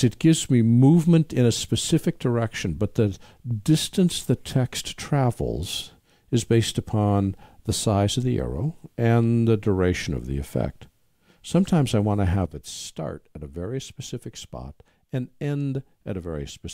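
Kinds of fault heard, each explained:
Sudden gain jump: a digital gain setting likely changed between two consecutive samples with no ramp, so at 12.46 s the whole signal, background noise included, drops together by about 9 dB in one step and stays at that lower level through the end.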